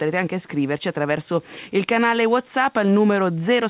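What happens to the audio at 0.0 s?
Nothing goes wrong at 0.0 s: the sound there is intact, carried through the call path's telephone-band codec, which fits G.711 A-law, with nothing above 4 kHz.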